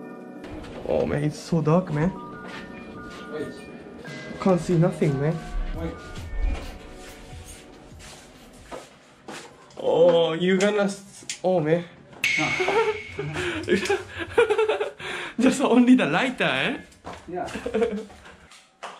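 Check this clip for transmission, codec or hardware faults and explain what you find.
Two brief bursts of DAB burbling are audible, both pointing to weak digital radio reception. DAB burbling occurs first at 6.24 s and again from 14.16 to 14.42 s. Residual bit errors, which fits a rate of roughly 0.15 and 0.1 percent respectively, slip past the error correction into the MP2 stream. Corrupted samples put short noise blips in individual sub-bands, and corrupted scale factors make sub-bands leap in level for up to a frame, producing short blips of noise over the audio.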